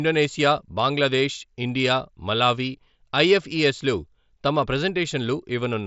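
No faults in this speech; the band stops at about 7.7 kHz, consistent with a Bluetooth mSBC headset path working as designed.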